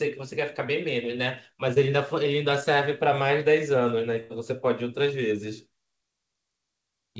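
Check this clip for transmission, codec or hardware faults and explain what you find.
Two transmission faults are audible. The band stops at 8 kHz, which fits a wideband call codec such as G.722, and that edge is not a fault.

From 1.74 to 1.78 s there is short concealed packet loss. About 20 ms never arrived in time, so the receiver extended the preceding sound and blended back. The result is a brief smear with no audible gap, unlike a burst.

From 4.20 to 4.32 s there is a burst of packet loss. About 100 ms went missing, and the concealment stretched the last sound while fading it into a held buzz or hiss. The audio then resumes with that stretch skipped, which makes this longer and more noticeable than a single-packet blip.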